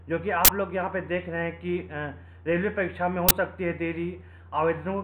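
At 0.45 s, lasting about 43 ms, and again at 3.29 s, lasting about 21 ms, the audio is replaced by an abrupt, loud burst of harsh digital noise. This is an uninitialised buffer: a block went to the output before any audio had been written into it, so whatever stale data sat in that memory was played back as samples. The two lengths fit buffers of 2048 and 1024 samples.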